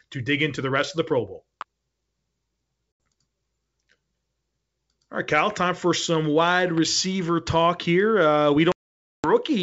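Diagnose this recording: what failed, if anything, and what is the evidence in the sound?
Electrical switching spikes at 1.61 s and at 6.77 s, the second right after "time for some wide", sit in the analogue wiring stage. Each is a sharp snap or a tight cluster of clicks lasting well under 20 ms, added on top of the speech rather than replacing it. The likely cause is a nearby switch, motor or static discharge whose arc was induced into the audio line as a brief voltage transient.

Packet loss on an ADPCM call appears at two points in the network stage: 2.92 to 3.00 s, an 80 ms gap, and 8.72 to 9.31 s, a hole of about half a second. The second gap suggests something like fifty lost packets. Each gap is hard-edged silence. Because ADPCM codes differences, the decoder's predictor and step size drift from the sender's during the gap. When speech resumes, it comes back slightly distorted, then settles within tens of milliseconds. 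The G.722 wideband coding at 64 kbit/s carries the speech, with clear detail up to 7 kHz.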